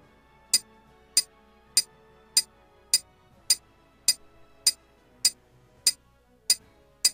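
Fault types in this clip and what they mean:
overlapping chunks: Each 2-second chunk begins slightly before the previous one ends. A 13 ms piece plays twice, heard as a brief click at 5.97 s.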